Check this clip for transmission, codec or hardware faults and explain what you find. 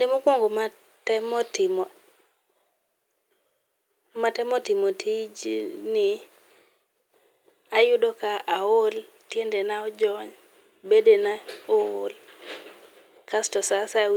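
No faults detected.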